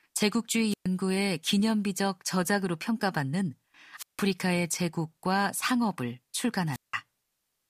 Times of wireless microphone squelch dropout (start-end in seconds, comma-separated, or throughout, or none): 0.69-0.86, 3.96-4.21, 6.71-6.95